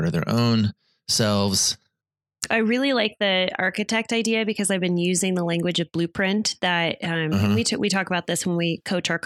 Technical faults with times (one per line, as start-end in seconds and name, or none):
none